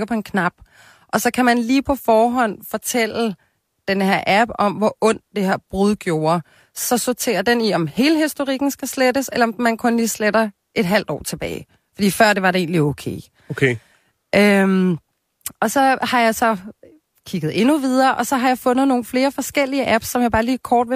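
Nothing in this speech recording trips any alarm: no dropouts, glitches or other technical faults turn up anywhere along the way.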